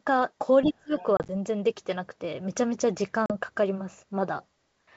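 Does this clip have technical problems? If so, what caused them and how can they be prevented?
Yes. Speech suppressed in double talk, 0.63 to 0.98 s: the voice drops by about 30 dB for roughly 300 ms, likely because the echo canceller mistook overlapping speech for echo and attenuated everything. A double-talk detector that holds adaptation and limits suppression during overlap prevents this.

The other side's voice leaking through, 0.97 to 1.04 s: a faint second voice, about 20 dB below the talker, likely residual loudspeaker echo the canceller failed to remove. Better acoustic isolation and a well-converged echo canceller with residual echo suppression prevent it.

Packet loss on an ADPCM call, 1.17 to 1.30 s and 3.26 to 3.33 s: the first event loses 60 ms of audio in gaps scattered over 120 ms, the longest 30 ms; the second loses 40 ms. Each silent hole has hard edges. Afterwards the decoder's predictor and step size are out of step with the sender's, so the speech returns slightly distorted before settling. 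Forward error correction, a jitter buffer and packet loss concealment that resets the decoder state cleanly prevent this.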